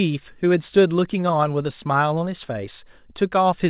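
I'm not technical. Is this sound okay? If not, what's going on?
Yes, no faults here.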